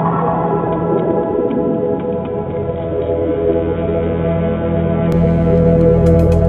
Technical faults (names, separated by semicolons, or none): input switched to a poorer device